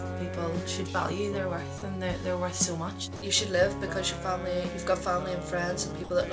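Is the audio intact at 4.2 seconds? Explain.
Yes, the audio is intact at 4.2 s, with nothing there beyond the steady call-path sound of a G.722 codec that leaves no content above 8 kHz.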